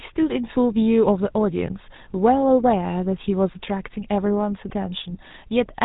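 Speech runs through GSM full-rate codec damage from start to finish, and it is plainly audible. The codec rebuilds the voice from a model of the vocal tract, excited by evenly spaced pulses built from every third sample. That coarse excitation gives the sound a buzzy, gravelly roughness. Nothing comes through above 4 kHz, so the top end is gone and the speech sounds boxed in. The quality fits a 13 kbps stream.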